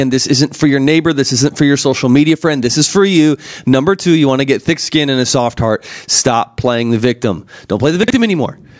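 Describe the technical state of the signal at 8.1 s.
Around 8.03 to 8.10 s, the audio shows chunks out of order: a block of about 23 ms was delivered late and played two blocks behind where it belonged. No audio is missing, but the misplaced segment produces three hard joins, heard as a brief jumbled moment.

Through this moment the level is also pumping: the gain swings by around 15 dB under each loud sound, flattening the dynamics into a squashed texture. The likely cause is input gain set far too high, with a fast limiter clamping every peak.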